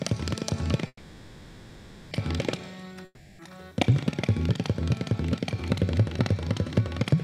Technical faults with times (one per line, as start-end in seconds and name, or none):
0.87-2.13 call audio freeze
3.05-3.41 long network dropout